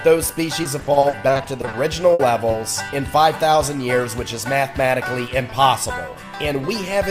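Repeated packet loss (robotic sound) runs from 0.63 to 1.75 s. More than a dozen short holes, none longer than 40 ms, arrive in quick succession, each patched by extending the preceding sound. About 320 ms is replaced in total, nearly a third of the stretch, giving choppy audio with pieces missing.

A burst of packet loss follows at 2.13 to 2.21 s. Roughly 60 ms failed to arrive in time, so the receiver kept the last sound going while fading it down. This is heard as a held buzz or dwindling hiss before the audio resumes with that portion gone.

Short concealed packet loss occurs at 2.51 to 2.55 s, where about 20 ms went missing. The gap was bridged by continuing the prior sound, from its pitch or as shaped noise, then blended back in, leaving a brief smear or wobble.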